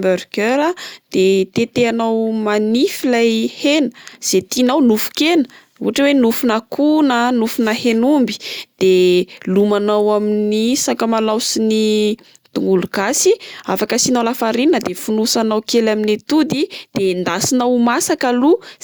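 No technical faults are audible anywhere in the recording.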